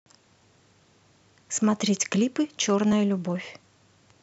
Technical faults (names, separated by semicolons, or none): clock drift buffer slips